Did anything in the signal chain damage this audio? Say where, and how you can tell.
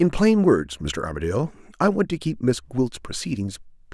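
No, nothing in the signal chain damaged this speech.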